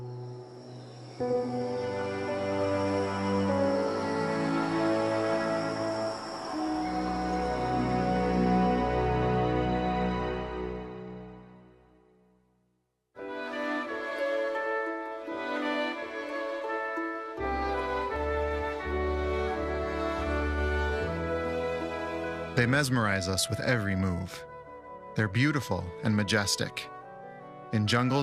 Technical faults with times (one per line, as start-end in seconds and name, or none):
1.88-2.06 DAB burbling